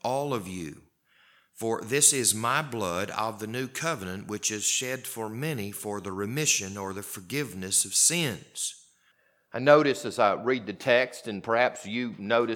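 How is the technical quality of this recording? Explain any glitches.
Listening closely, nothing in the recording stood out as a technical problem worth pointing to.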